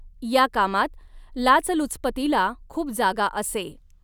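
No technical faults are audible anywhere in the recording.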